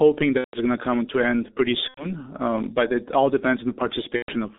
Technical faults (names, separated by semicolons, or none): G.723.1 codec; VoIP packet loss concealed by the speech codec